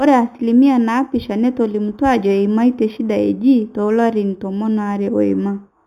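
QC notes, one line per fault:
Throughout, imaging from linear upsampling: the speech sounds like it was raised from an 8 kHz rate with straight-line interpolation, so the top is dulled and a faint mirrored copy sits at 4 to 8 kHz, roughly 35 dB down, giving sibilants a light metallic shimmer.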